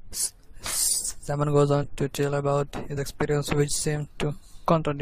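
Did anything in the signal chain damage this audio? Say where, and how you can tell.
Yes, at the codec: compressed frames skipped at 1.82 s, before "to tell about", and at 2.96 s, before "experiences which". Roughly 100 ms and 50 ms vanish in whole 23.2 ms frames. At each join the speech jumps ahead by the length of the frames left out.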